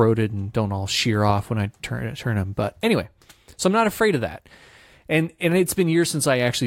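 Listening to the speech, nothing stood out as a technical problem.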